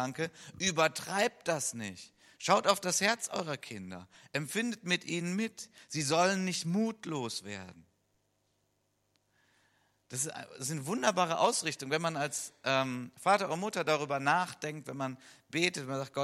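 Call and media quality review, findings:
No audible faults found in this speech recording.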